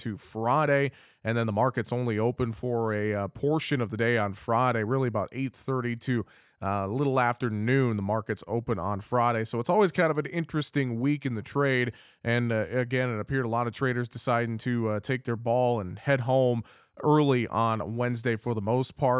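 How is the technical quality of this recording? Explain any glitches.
No glitches can be heard.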